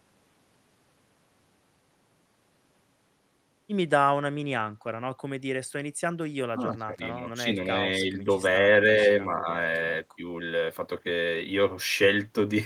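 From 6.5 to 7.22 s, 7.43 to 7.87 s, 8.12 to 8.28 s, 9.27 to 9.47 s and 10.17 to 10.22 s, speech is suppressed in double talk. The level ducks by a few decibels up to about 20 dB, likely an echo canceller turning both talkers down. Unlike packet-loss dropouts, these are uneven partial dips, not clean silences.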